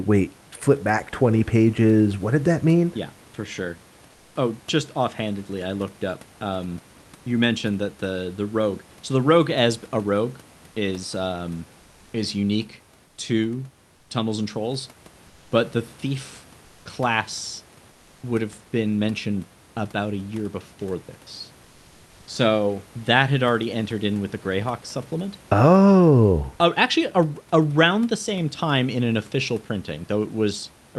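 Speech with comfort noise in place of the background during seven short pauses: 4.11, 11.81, 13.07, 13.95, 15.27, 16.65 and 17.91 s, each 0.1 to 0.3 s long. The room noise turns smooth and featureless, about 2 to 4 dB quieter. Likely cause: Opus discontinuous transmission.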